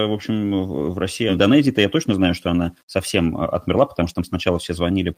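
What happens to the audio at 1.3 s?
A skip ahead occurs at 1.29 s. Roughly a second of speech is dropped while later audio is already queued, so playback jumps forward by about that much. No gap is left and nothing fills it: the audio before the jump is joined almost directly to the audio that follows. A listener hears the speech lurch forward abruptly, with a stretch of content simply missing across the join.

Low bit depth without dither runs through this moment as it does through the whole clip. The speech carries a grainy distortion that tracks the signal rather than sitting underneath it as a constant floor. It is about 45 dB below the signal, which fits 10-bit rounding. The likely cause is that the audio was reduced to only a few bits and rounded without dither, so the error follows the waveform, and quiet passages turn gritty.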